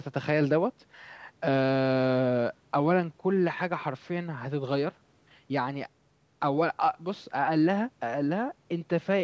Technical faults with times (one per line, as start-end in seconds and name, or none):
none